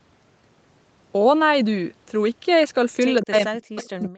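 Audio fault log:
3.21–3.40 s, echo leak. A faint, delayed copy of the speech returns here, lagging the original by about 169 ms. It sits far below the main speech. This is likely a loudspeaker on the far side feeding its own microphone. That end's echo canceller did not remove all of it. The leftover was sent back down the line as a ghostly repeat.
3.21 s to the end, speech suppressed in double talk. Starting with the echo, the talker's speech sinks sharply. At its lowest it drops to near silence, a very deep cut. Both sides seem to speak at once here. The echo canceller likely could not tell the local talker from the loudspeaker echo, so it turned both down together.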